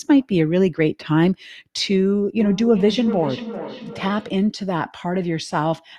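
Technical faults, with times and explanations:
2.39–4.49 s, feedback echo between two devices: the speech returns roughly every 0.4 s, peaking about 12 dB below the direct voice, sounding thinner and ringing. One device's loudspeaker feeds another's microphone, and neither echo canceller removes playback from the other device.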